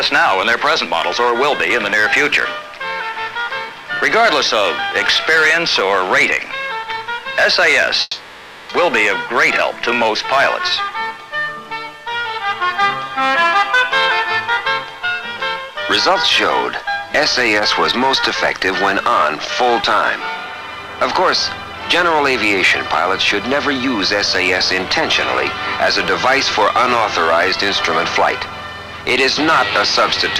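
From 8.01 to 8.71 s the sound smears into a fading buzz, then resumes with 0.68 s missing, likely a long network dropout rather than brief packet loss.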